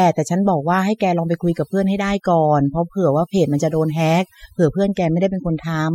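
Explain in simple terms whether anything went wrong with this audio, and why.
From start to finish, in the gaps between phrases the background drops and breaks up into twinkling, warbling specks. That is overdone noise removal: a noise reduction tool was turned up too far. Wherever a band of pitch came close to what it judged to be noise, it pushed that band nearly to nothing, taking the softer parts of the voice along with the noise.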